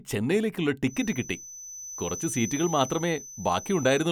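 From 0.82 s to the end at 4.11 s, a thin, steady feedback whistle near 6 kHz sits behind the speech, about 15 dB below it and swelling and fading slowly in level. The likely cause is a loudspeaker-to-microphone loop held just at the feedback point, so one frequency keeps ringing without building up. Unlike a runaway howl it never builds into a howl, and unlike fixed electrical interference its level drifts rather than staying perfectly constant.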